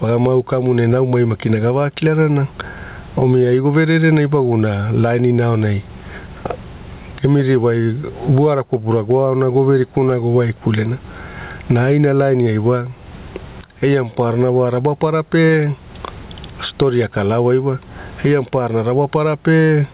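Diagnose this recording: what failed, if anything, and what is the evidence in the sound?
Gain pumping throughout: the gain swings about 20 dB, pulled down on every loud sound so loud and soft parts sit closer in level, likely from excessive call-processing gain hitting a fast limiter. A noise gate would silence the gaps instead.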